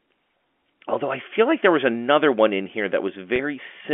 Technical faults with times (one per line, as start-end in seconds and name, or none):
3.36-3.39 packet loss with pitch repetition